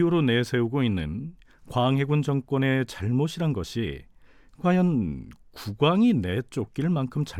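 No technical faults can be heard anywhere in the recording. Nothing in the speech calls for a timed note.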